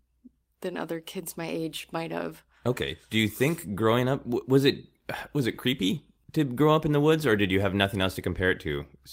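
No technical faults are audible.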